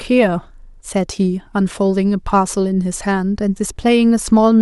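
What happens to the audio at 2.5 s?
At 2.5 s the speech carries on intact, with no audible fault at that moment.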